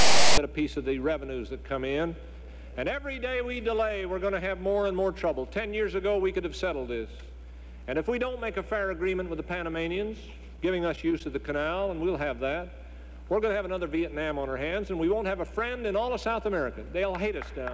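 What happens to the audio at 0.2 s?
At 0.2 s the sound is file tags played as audio: from 0.0 to 0.38 s, text tag bytes are decoded as samples, giving a loud, hard-edged, one-sided rasp.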